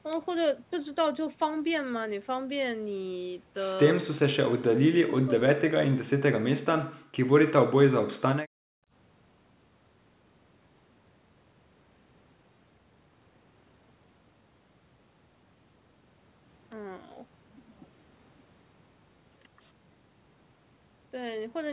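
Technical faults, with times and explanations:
4.45–7.29 s and 7.66–7.70 s, speech suppressed in double talk: the speech falls by up to about 40 dB in pieces, likely because an echo canceller could not separate this side's speech from the loudspeaker echo of overlapping far-end talk.
8.47–8.92 s, background gated by the echo canceller: room sound drops by about 37 dB for roughly half a second while loudspeaker playback triggers hard microphone attenuation, then returns.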